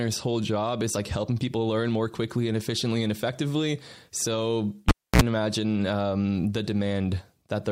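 Speech with a cable pulled and plugged in at 4.89 to 5.22 s: a pop, about 280 ms of near silence, then a 56 ms burst of 60 Hz mains buzz and a second pop before "imagine um the". That buzz marks a cable fault rather than a plain dropout.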